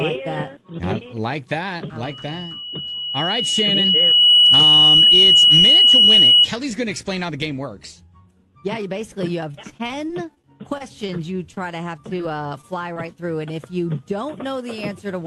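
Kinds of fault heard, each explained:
Loudspeaker feedback squeal: a 2.9 kHz tone swells over about two seconds to roughly 15 dB above the sound, as the microphone picks up its own loudspeaker.
Repeated packet loss (robotic sound): the audio turns choppy with pieces missing for over a second, as ten short gaps in a row are each patched by extending the last sound.
Short concealed packet loss: three brief smears or wobbles appear, each where about 20 ms of audio never arrived and the receiver filled the hole from the preceding sound.
Short stall from a late packet: a sound is briefly held about 20 ms too long, because the jitter buffer ran empty and stretched the audio until the late packet came in.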